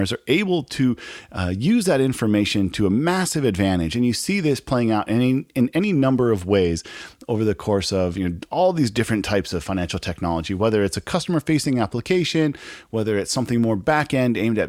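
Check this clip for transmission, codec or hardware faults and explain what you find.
No transmission, codec or hardware problem can be heard anywhere in the speech recording; the signal stays continuous and steady throughout.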